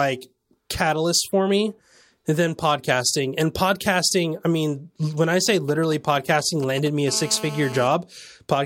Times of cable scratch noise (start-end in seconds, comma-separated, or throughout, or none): none